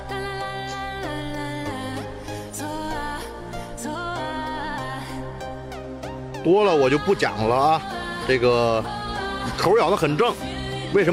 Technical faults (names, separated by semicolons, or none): none